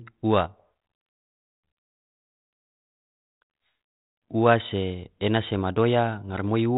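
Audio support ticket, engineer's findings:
Bit errors on ADPCM link, 6.29–6.41 s: pops, rough burst, level jumps. Flipped bits derail decoder step size and predictor, so damage rings on rather than leaving silent packet-loss gaps.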